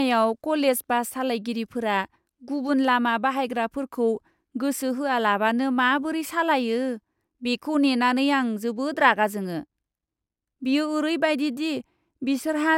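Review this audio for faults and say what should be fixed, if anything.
Nothing here needs fixing, since no faults turn up anywhere in this speech recording.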